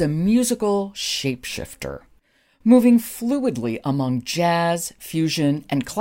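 No technical faults can be heard anywhere in the speech recording. Nothing interrupts or alters the sound at any point.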